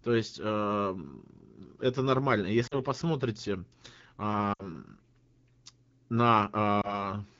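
Lost AMR speech frames at 2.67–2.81 s, 4.53–4.74 s and 6.81–7.10 s: the decoder patched short gaps with repeated pitch and vocal tract settings at falling gain, causing drops to near silence in the two- and three-frame runs, a brief dip or warble at the single lost frame, and weak, rough recovery.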